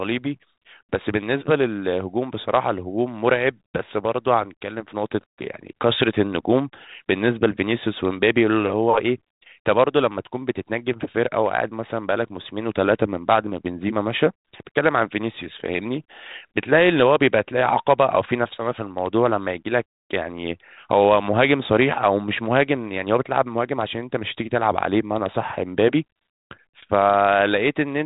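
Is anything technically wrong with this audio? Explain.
Yes, there's one fault: bit errors on an ADPCM link, from about 26.81 to 26.84 s, near the end. The link is G.726 ADPCM at 32 kbit/s, and a few flipped bits, maybe a fraction of a percent, throw off the decoder's adaptive step size and predictor, so each error keeps ringing briefly. You hear a short pop and a rough, gritty burst with a quick jump in level, which points to a couple of frames being hit.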